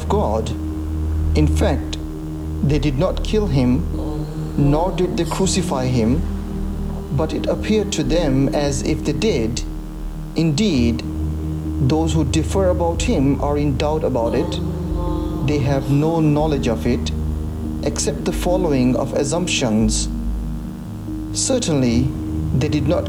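A screen or video cable is coupling into the audio path for the whole clip, and the result is video or display buzz. The interference is locked to the picture's refresh, a 75 Hz field rate, so the sound carries a steady buzz at 75 Hz and its harmonics, with a layer of gritty hash above it. It sits roughly 25 dB below the program.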